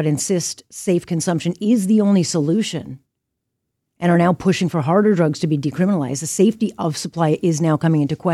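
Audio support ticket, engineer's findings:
No audible faults found on review of this recording.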